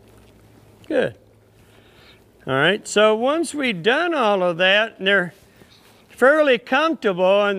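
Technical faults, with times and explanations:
Nothing stood out on listening to this recording.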